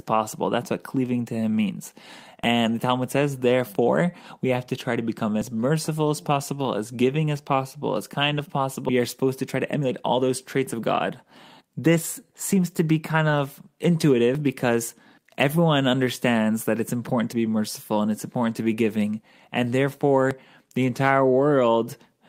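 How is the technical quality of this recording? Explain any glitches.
The recording has three kinds of timing glitch: regular short skips, one larger jump forward, and two stretches where the speech is hurried.

Audio missing between chunks: there are skips at 2.44, 5.42, 8.39, 11.37, 14.35, 17.33 and 20.31 s. The spacing is almost exactly 3.0 s, which fits a recorder or processor handling 3-second blocks. It likely drops a short piece, around 20 ms, at each block boundary. The two sides are butted together, so each skip is a small jolt in the speech. One falls just after "as possible as kind" and another just before "because everyone understands that".

Skip ahead: at 8.89 s, playback jumps forward with no gap, and roughly 0.7 s of speech is missing. A stretch of audio was discarded while later audio was already queued, so the receiver went straight to the newer material. The cut falls directly between the two sides. 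The listener hears an abrupt discontinuity in the sentence.

Jitter buffer speed-up: from 8.99 to 10.75 s, the speech runs at about 112% speed with about 200 ms removed. From 11.61 to 12.54 s, just before "to be kind of", it runs at about 107% with about 70 ms removed. The receiver trimmed short pitch-period pieces again and again to bring its buffered delay down. The speech sounds rushed while the pitch stays the same.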